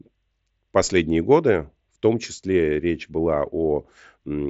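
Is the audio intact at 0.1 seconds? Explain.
Yes, the audio is intact at 0.1 seconds, with no fault at that moment.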